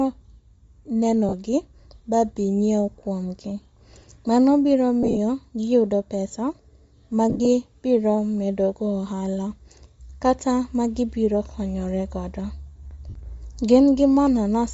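Throughout the speech, the upper band sounds breathy and grainy rather than simply dull. That points to Bluetooth LC3 compression at a low bitrate, likely around 32 kbps with 10 ms frames, where upper spectrum is zeroed and refilled with noise instead of cleanly rolled off.

Lost LE Audio frames then occur at 1.29–1.34 s, 5.03–5.18 s just before "gi yudo pesa", 7.30–7.46 s, and 13.09–13.16 s. In each gap, the decoder repeats the last spectrum with scrambled phase, so the speech smears into noise. The two middle losses are scattered, with longest runs of about 40 ms.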